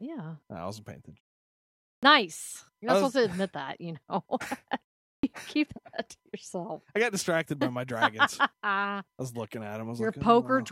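At 1.98 s there's a clipped start after a pause. After about 0.86 s of quiet, the output device seems to have dozed off and needs a moment to wake, so the first 47 ms of speech vanish and the sound snaps in already mid-onset. It happens again at 5.19 s, after a shorter 0.42 s gap, losing about 44 ms right before "keep that to yourself".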